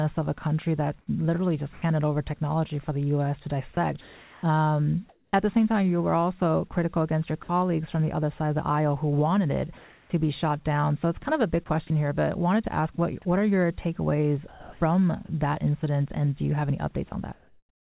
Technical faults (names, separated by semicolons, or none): sound dropped by the voice detector; comfort noise in place of the background; sound chopped by the voice detector